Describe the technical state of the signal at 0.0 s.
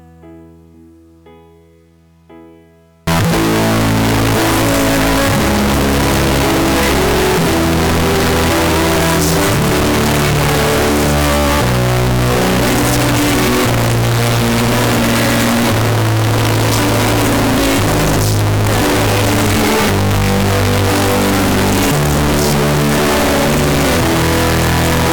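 At 0.0 s the audio is intact, with nothing faulty at that moment.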